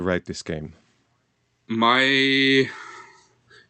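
From 1.67 s to 2.79 s the speech and the background noise beneath it swell together, climbing by about 6 dB over roughly a second rather than jumping. That even, shared rise is the signature of automatic gain rising: the gain control judged the incoming level too low and stepped its gain up gradually, lifting everything in the signal at once. The audio also passes through an Opus call path, whose top end stops near 8 kHz.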